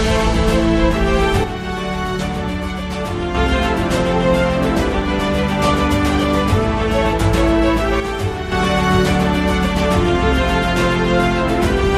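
At 1.44 s the sound abruptly drops by about 6 dB and stays there until 3.35 s, then snaps back. The same step recurs from 8.00 to 8.52 s. This is likely one channel dropping out, with only the surviving side reaching the mono sum. On a waveform both stretches appear as sudden, flat-edged dips in envelope height. A spectrogram shows the same vertical boundaries, with energy dimmed evenly across all frequencies during each drop.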